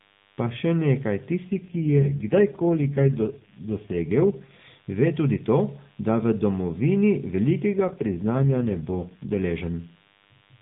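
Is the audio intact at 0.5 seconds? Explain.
No. At 0.5 s, a DECT cordless phone buzz sits under the speech, as it does throughout the clip. A nearby handset or base sends a radio burst every 10 ms, and the audio circuit rectifies it. The result is a thin, steady 100 Hz buzz rich in harmonics, about 35 dB below the speech, beneath the narrowband mobile-codec sound.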